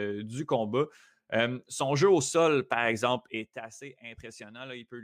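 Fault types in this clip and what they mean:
zipper noise: Between 3.16 and 3.69 s the speech level drops by roughly 15 dB in abrupt 1 dB jumps instead of a continuous slope, at around fifty steps per second. Each jump leaves a tiny click, so a fine ticking rides on the sound while it fades. On the waveform the envelope descends as a staircase. On the spectrogram each step shows as a faint vertical broadband line, forming a regular comb across the fade.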